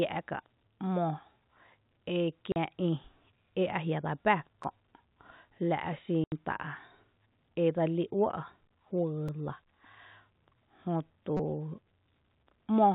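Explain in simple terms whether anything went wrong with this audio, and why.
Two faults can be heard in this telephone-band speech.

Packet loss filled with silence: the sound drops out completely for 40 ms at 2.52 s and for 80 ms at 6.24 s. Chunks of audio never arrived and silence was played instead. The gaps have abrupt edges, and the gap lengths fit 20 ms packets.

Repeated buffer: at 4.64 s and 9.28 s, a tiny slice of about 5 ms plays twice. From 11.37 to 11.39 s the same slice plays four extra times. New audio arrived late, so the device replayed its last buffer. This causes clicks and a brief buzz, which fits a 256-sample buffer.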